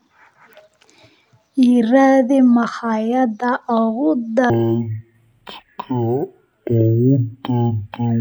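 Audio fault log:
4.50–8.21 s, stereo read as mono: interleaved left and right samples play as one channel. The speech slows to half speed and drops an octave.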